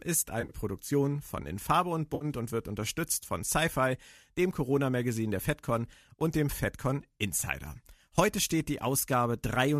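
AAC frame loss with concealment occurs three times in this speech. From 0.41 to 0.54 s, about 80 ms of audio goes missing across a 100 ms stretch, with the longest gap around 50 ms. From 2.15 to 2.25 s, just before "und wird unterstützt von", about 60 ms is lost. From 7.45 to 7.48 s, about 20 ms is lost. The durations point to short frames of roughly 10 ms, which fits the light coding of what is likely AAC-ELD at 64 kbps.

In each gap the decoder reuses the last good spectrum with randomised phase, so the audio turns briefly smeared and hissy. On a spectrogram the harmonic lines blur into flat noise bands. On the waveform the envelope goes irregular.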